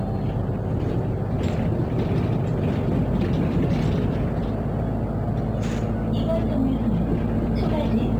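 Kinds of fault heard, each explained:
Crude rate conversion: gritty, inharmonic fizz trailing loud, bright sounds throughout, roughly 40 dB down, from unfiltered sample dropping fitting a 48 to 44.1 kHz change.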